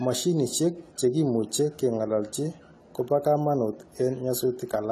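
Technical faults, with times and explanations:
Throughout, AAC compression: the speech is dull and smeared, with fizzy, warbling sibilants and nothing above 14 kHz, which fits about 32 kbps. A plain low-pass filter would roll off cleanly; here the likely cause is coarse band quantisation leaving holes and substitute noise.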